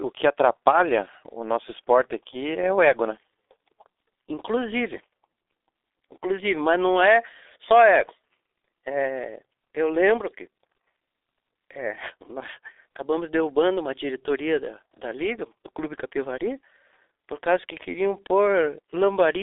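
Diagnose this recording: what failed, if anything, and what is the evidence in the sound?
The failure is at the codec stage: the whole recording has gone through the G.723.1 codec, and it's been hit hard. The speech sits in a telephone band of about 300 Hz to 3.6 kHz, so it's muffled, with no air on top. You can hear it throughout as hoarse, smeared speech with consonants blurring together, which points to a low rate of around 6 kbit/s. The codec works in 30 ms frames and models the voice coarsely and slowly, so quick detail is lost.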